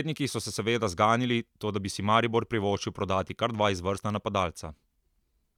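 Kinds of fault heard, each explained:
No technical fault can be heard anywhere in the signal, which stays continuous and undisturbed throughout.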